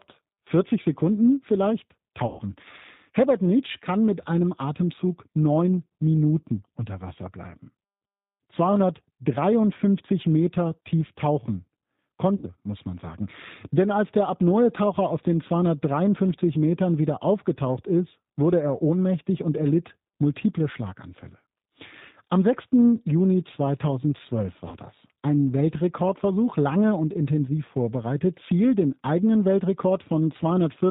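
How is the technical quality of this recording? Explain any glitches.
The technical quality is compromised: the speech passes through a low-bitrate telephone codec for its whole length, and it breaks up briefly three times.

The G.729 codec damage is plainly audible from start to finish. The sound points to G.729A at 8 kbit/s. This codec rebuilds speech from a vocal-tract filter, a pitch predictor and a few pulses per frame, so the voice sounds rough and slightly synthetic. On a spectrogram everything above 4 kHz is empty, and the harmonics look grainy rather than clean.

VoIP packet loss concealed by the speech codec occurs at 2.27–2.42 s, 12.35–12.46 s (just before "muss man sagen") and 24.68–24.76 s. About 120 ms, 80 ms and 40 ms of audio went missing. The decoder filled each gap by repeating its last pitch and filter at falling gain, which turns the speech into a fading buzzy tone or coloured noise. 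A spectrogram shows frozen, smeared harmonic stripes, and the waveform shows an envelope that shrinks steadily before normal speech resumes.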